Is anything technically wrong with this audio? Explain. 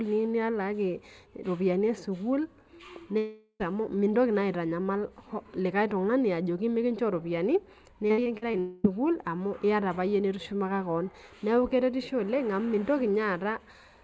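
Yes, three kinds of fault are audible in this speech.

Channel delay (comb filtering) runs throughout. One channel lags the other by roughly a tenth of a millisecond, which fits a delay of a few samples. When the two are summed to mono, cancellations fall at evenly spaced frequencies starting near 5 kHz, giving the speech a hollow, phasey colour.

A long network dropout is heard from 3.18 to 3.62 s, and another from 8.59 to 8.86 s. The likely cause is audio that never arrived. The receiver stretches the last sound into a fading buzz, briefly touching silence in the first case, and speech resumes with those portions missing.

Repeated packet loss (robotic sound) occurs from 8.08 to 8.55 s. Five separate holes, the longest about 58 ms, are each patched by extending the preceding sound. Roughly a third of that stretch is concealed this way, so the speech turns choppy just before the second dropout.

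The speech also passed through a G.722 call path, so nothing above 8 kHz is present.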